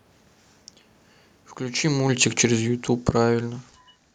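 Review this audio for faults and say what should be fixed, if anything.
Automatic gain falling runs from 1.73 to 3.79 s, shortly after the talker shifts position around 1.5 s. The gain control judged the input too loud or its background noise too strong and eased its level down by about 11 dB, so the speech and the room noise sink together. On the waveform the envelope tapers steadily across that span. On a spectrogram the whole band, background included, fades uniformly. To prevent it, lower the input level at the source or give the automatic gain control a higher threshold and slower response.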